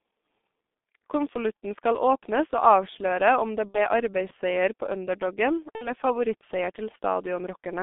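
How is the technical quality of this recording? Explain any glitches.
The recording is poor. The whole speech clip carries G.723.1 codec damage, and it has two packet-loss glitches. The sound is band-limited to about 200 Hz–3.6 kHz, which fits a 6.3 kbit/s coder. Its coarse 30 ms frames leave the voice muffled and hoarse, with smeared consonants.

From 3.68 to 3.80 s, after "og avsløre om det" and before "arbeidsseier på underdogen", there is VoIP packet loss concealed by the speech codec. About 60 ms went missing, which fits two lost frames. The decoder stretched its last pitch and filter into a fading substitute sound. The voice stays weak or distorted for a while afterwards.

From 5.75 to 5.93 s, just after "arbeidsseier på underdogen", the same concealment happens again. The two lost frames are filled in the same way.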